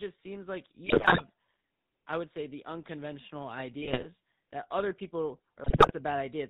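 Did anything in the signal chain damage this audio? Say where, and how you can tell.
Yes. The damage comes from the codec stage. The whole speech clip runs through the GSM full-rate codec at 13 kbps. Nothing above 4 kHz survives. A buzzy, gravelly roughness sits on everything. The codec rebuilds speech by driving a vocal-tract filter with sparse, regularly spaced pulses.

GSM bit errors also hit the radio link in three bursts. They come at 0.86–1.22 s after "seems like", at 3.82–4.06 s after "would say the unconventional", and at 5.64–5.92 s after "that other people". Each burst squawks, pops and gargles. Corrupted filter, pitch and gain values warp the spectrum or spike the level.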